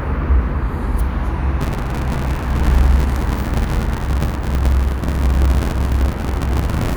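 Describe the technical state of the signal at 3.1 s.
At 3.1 s the sound is inside a stretch of buffer tearing that runs from 1.60 s to the end of the clip. The writer and reader of the ring buffer have drifted out of step, so about a third of every period replays audio from around 50 ms earlier, spliced in with hard joins. This produces a steady rattling buzz near 86.1 Hz, which fits a 512-sample buffer. Unlike underrun dropouts, it inserts no silent gaps and follows the signal continuously.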